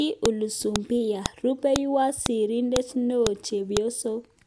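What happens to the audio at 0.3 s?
At about 0.26 s, a file header played as audio: leftover header bytes from a joined half-second piece produce a sharp snap, visible as a thin spike.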